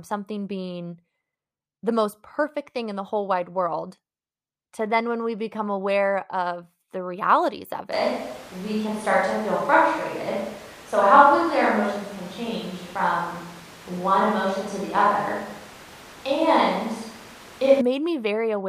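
At 7.92 s the speech turns abruptly roomy and hollow, and it stays that way until 17.81 s, when the close sound returns just as suddenly. This is a switch to a distant microphone, likely because the close microphone's signal dropped out and a farther one took over. Loudness barely changes, but the low end thins and room noise rises to roughly 20 dB below the speech. On a spectrogram, the bass band weakens and a raised noise floor fills the pauses between those hard edges.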